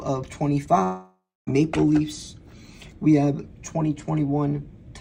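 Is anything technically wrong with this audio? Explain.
Yes. From 0.83 to 1.49 s there is a long network dropout. The last sound stretches into a fading buzz, then about 270 ms of silence. The audio resumes without the missing 640 ms. The likely cause is lost packets the receiver tried to conceal.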